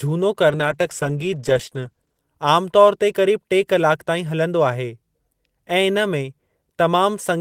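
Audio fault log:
0.51–2.29 s, call bitrate drop: the call's bandwidth estimate fell and the encoder coded far more coarsely, consistent with a drop from about 32 to 13 kbps held for roughly 1.7 s. The speech turns rough and watery, its upper frequencies cut away, until the rate recovers.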